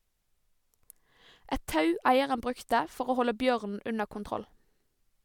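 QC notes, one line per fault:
Nothing to flag here; the speech comes through without any technical problems I can hear.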